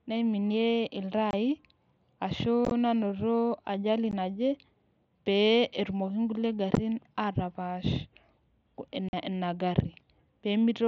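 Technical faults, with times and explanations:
1.31–1.33 s, 2.65–2.71 s, 4.11 s, 6.75 s and 9.09–9.13 s: unconcealed Bluetooth headset packet loss. Headset-to-phone voice packets, fitting 7.5 ms mSBC frames, vanished and were replaced by silence or an idle pattern, leaving abrupt holes. The 2.65 s loss is scattered and sounds choppy.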